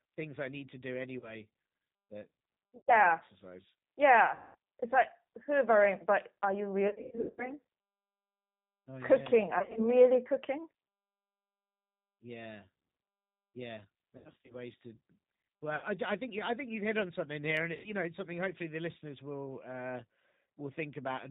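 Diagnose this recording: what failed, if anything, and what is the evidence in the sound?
The codec stage is the constant fault: the speech has the rough, slightly synthetic texture of G.729, with nothing above 4 kHz, and the codec damage is plainly audible throughout. The speech is rebuilt from a vocal tract filter, a pitch predictor and a few pulses per subframe, which fits 8 kbit/s G.729A. A plain band-limit would only sound muffled. This has a grainy, buzzy, modelled quality, unlike the smearing of a transform codec.

The network stage adds VoIP packet loss concealed by the speech codec, at 1.19 to 1.35 s, 2.77 to 2.95 s, 4.35 to 4.55 s, 6.88 to 7.52 s, 9.59 to 9.89 s, 14.17 to 14.56 s, 15.76 to 15.86 s and 17.75 to 17.94 s. About 30 to 380 ms of audio is missing in each. At 6.88, 9.59 and 14.17 s the losses are scattered, in runs of up to 100 ms. The decoder stretches the last pitch and filter into a fading buzzy tone or coloured noise, and the speech stays weak for a moment after packets return. 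A simple dropout would leave silence or a click, not this fading synthetic fill.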